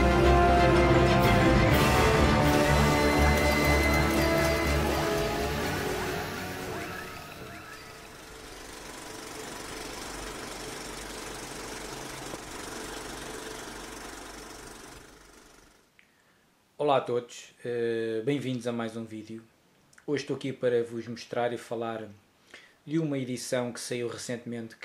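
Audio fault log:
0.0–8.7 s, doubled audio track: already running at the start, a second full-band copy trails by about 0.7 s, roughly 5 dB quieter, with no decay, stopping abruptly at 8.7 s, likely from a second, slower capture path or two unaligned copies in an edit.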